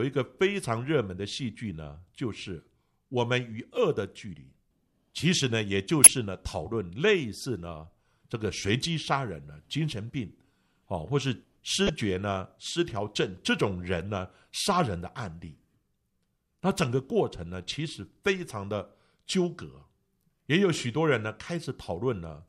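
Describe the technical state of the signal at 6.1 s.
A brief chirp of misplaced noise from 6.04 to 6.07 s: a corrupt frame decoded, where a couple of damaged compressed frames were played with misread gains.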